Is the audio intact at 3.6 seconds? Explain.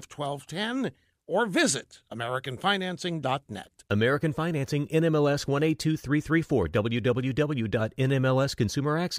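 Yes, at 3.6 seconds the speech plays through intact, with no audible fault at that moment.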